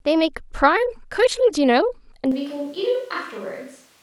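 From 2.32 s the speech turns abruptly roomy and bass-light, about 5 dB quieter, likely a switch to a distant microphone; the waveform steps down.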